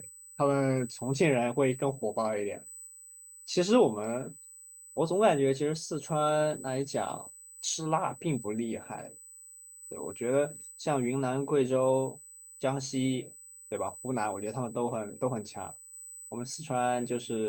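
Running under the speech the whole way through is a steady USB whine at 8 kHz, about 20 dB down, from the bus's 125-microsecond microframes leaking in through power or ground.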